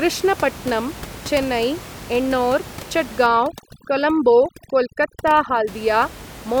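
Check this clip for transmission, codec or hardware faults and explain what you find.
One processing fault is present, against room noise sitting about 17 dB below the speech. From 3.26 to 5.67 s, overdone noise removal clamps bands near the noise estimate, leaving twinkling specks, and a spectrogram of scattered isolated dots over blank gaps.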